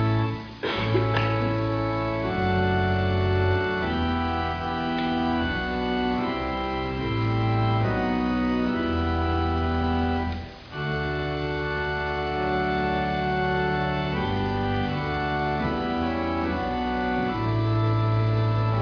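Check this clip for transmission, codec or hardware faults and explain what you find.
Nothing stands out here: I listened through and couldn't pick out any transmission, codec or hardware trouble worth flagging.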